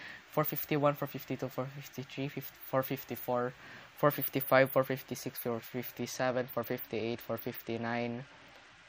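Bluetooth SBC bit pool drop, from 5.97 s to the end of the clip at 8.89 s. The sudden loss of detail fits a congested wireless link forcing the encoder to shrink its bit pool from about 28 to 10, near 84 kbps. With so few bits, the highest sub-bands are starved or dropped outright and the remaining bands are quantised coarsely. The top end turns dull and muffled while a gritty, granular noise rises, and neither recovers before the audio ends.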